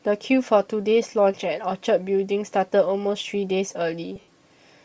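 A speech clip with a grainy, breathy edge throughout. The top of the spectrum sounds thin and hissy rather than detailed, as if noise stands in for real high-frequency content. The damage is plainly audible. The likely cause is Bluetooth LC3 compression, the LE Audio codec, running at a low rate. The coarseness fits a bitrate near 32 kbps with 10 ms frames. Between 4.16 and 4.28 s there are lost LE Audio frames. The speech dissolves into a noisy smear instead of dropping out cleanly. The decoder seems to repeat the last spectrum with scrambled phase to cover each gap. About 90 ms goes missing across that 120 ms stretch. That points to roughly nine lost frames. The longest unbroken run is around 70 ms, and there the smear fades before the speech returns.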